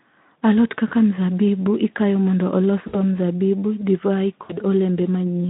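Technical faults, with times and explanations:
0.87–0.94 s, 2.87–2.98 s and 4.43–4.57 s: VoIP packet loss concealed by the speech codec. About 40 ms, then 60 ms, then 60 ms of audio go missing. The gaps fall just before "mzabibu ikayo mondo", between it and "mzabibu divai", and just after "mzabibu divai". The Speex decoder on this narrowband line replays its last pitch and filter at falling gain. The speech smears into a brief buzzy tone or coloured noise that fades. It stays weak for a moment after packets resume.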